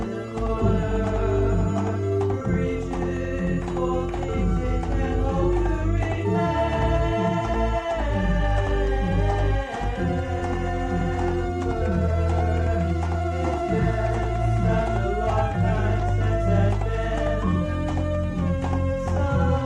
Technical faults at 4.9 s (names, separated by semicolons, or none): none